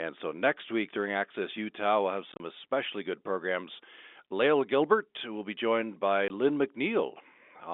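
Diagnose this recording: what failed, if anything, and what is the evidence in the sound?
Packet loss filled with silence, at the network stage. After "we'll have", 2.32–2.40 s holds scattered holes up to 30 ms; a 20 ms gap follows "will be joined by" at 6.28 s, fitting 10 ms packets. The waveform shows flat silent stretches; the spectrogram, blank columns.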